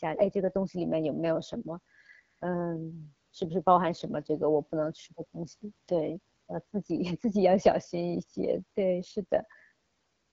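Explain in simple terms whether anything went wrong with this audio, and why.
The speech went through the AMR wideband (HD Voice) codec, the phone-network coder that rebuilds a voice from a simple model of the throat and mouth instead of storing the actual waveform. It ran at one of its lowest quality settings for the whole recording. At that setting the model is too coarse, so the speech sounds rough and raspy throughout, and nothing is left above 7.5 kHz, which takes away crispness and air.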